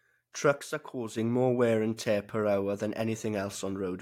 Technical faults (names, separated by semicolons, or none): one channel drops out